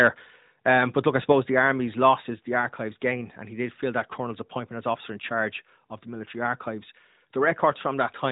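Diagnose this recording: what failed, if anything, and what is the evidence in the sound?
Microphone overload at the converter input, 1.58 to 1.68 s: the loudest peaks flatten into a harsh crackle, about 2 dB past full scale, with roughly one percent of samples squared off. The likely cause is input gain set too high. Codec distortion would persist throughout, but this appears only on peaks.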